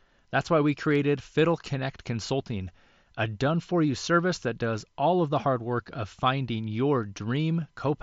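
Speech recording with no audible technical faults.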